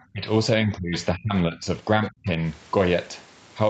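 Speech suppressed in double talk at 0.12–0.27, 0.61–0.94, 1.14–1.33, 1.49–1.64 and 1.98–2.4 s: the speech repeatedly dips by roughly 25 to 30 dB, and only about 10 dB around 1.5 s. This is likely an echo canceller mistaking the talker for far-end echo and ducking both together.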